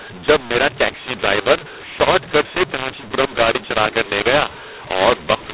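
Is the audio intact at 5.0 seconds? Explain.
No. At 5.0 seconds the speech sounds harsh and gritty, with levels jumping unevenly and pauses filled with noise. This is a mu-law and A-law mix-up running through the whole clip: telephone audio coded as A-law is decoded as mu-law, scrambling sample levels.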